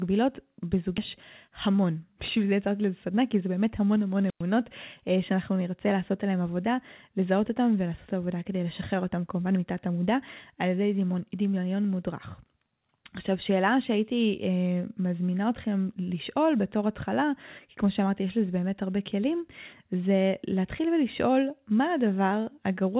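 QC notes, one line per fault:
0.98–1.00 s: skip ahead. About 400 ms of sound was dropped and playback jumps straight forward, joining both sides with no gap.
1.48–2.68 s and 3.10–3.81 s: jitter buffer speed-up. The buffer trimmed short pitch-period pieces, about 100 ms then 70 ms in total, running at 107% and 108% at unchanged pitch, so it sounds hurried.
4.27–4.43 s: wireless microphone squelch dropout. The FM radio signal faded, hiss rose, and squelch muted the output for about 105 ms before the sound returned.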